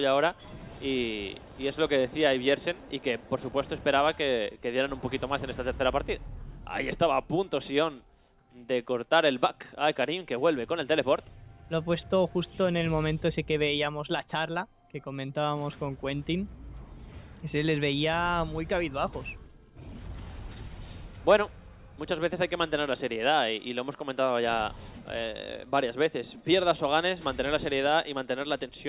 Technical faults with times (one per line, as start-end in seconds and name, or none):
none